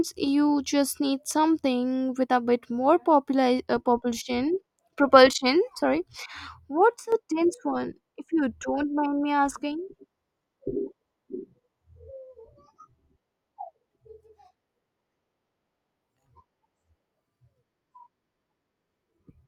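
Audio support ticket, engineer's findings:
Sudden gain jump, 7.00–7.12 s. Speech and background noise drop together by about 9 dB, stepping instantly with no fade. Likely a digital gain stage: a level setting or bit shift applied sample-to-sample without a ramp.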